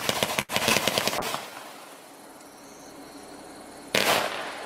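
A short stall from a late packet at 0.41 to 0.51 s holds the sound about 74 ms too long while the jitter buffer waits, then resumes with nothing lost. On a spectrogram the harmonics run flat and unchanging, and the waveform repeats one cycle shape. At 0.69 to 0.72 s a short concealed packet loss drops about 40 ms. The receiver bridges it with a very brief synthetic fill and skips ahead to regain roughly 30 ms of delay, leaving a small smear or wobble. From 1.19 to 3.21 s a call bitrate drop makes the audio coarse and muffled, which fits the encoder falling from around 128 kbps to about 27 kbps for nearly 2 s. The spectrogram shows the upper frequencies cut off and blotchy, watery texture below.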